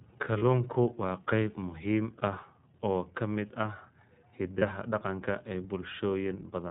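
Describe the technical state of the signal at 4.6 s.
At 4.6 s there is a brief dropout concealed as lost iLBC frames, running from about 4.58 to 4.63 s. The gap fits a single missing 30 ms frame. The decoder fills it by repeating the last pitch cycle blended with noise, so the sound briefly turns into a held, faintly buzzy vowel before clean decoding resumes right after. On a waveform this looks like a short run of near-identical repeated periods. On a spectrogram the harmonics freeze flat and level for that sliver of time.

Underneath, the whole passage carries the iLBC codec's band limit and texture. Each frame's excitation is coded on its own, at a rate that fits 13.33 kbps with 30 ms frames. The result has a plainly audible rough, slightly synthetic edge and no content above 4 kHz. A spectrogram shows a hard ceiling at 4 kHz with nothing above it, and the harmonic detail below looks somewhat smeared and grainy.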